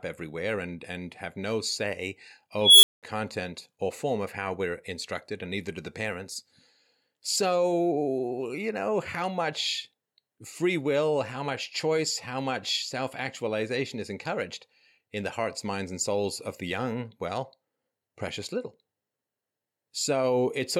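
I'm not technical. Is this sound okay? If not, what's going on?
No. At 2.61 s the speech is interrupted by an unstable filter: a processing stage runs away with itself, producing a high squeal around 3 kHz that swells for about 0.22 s until it clips, then cuts to about 0.2 s of silence before resetting at 3.03 s.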